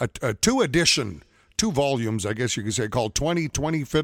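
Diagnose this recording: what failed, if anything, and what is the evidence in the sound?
Nothing in the speech points to a failure at any stage of the chain, and there is no audible defect to diagnose.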